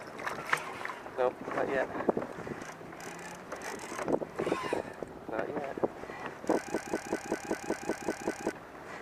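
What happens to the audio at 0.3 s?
Nothing goes wrong at 0.3 s; the audio is intact at that moment.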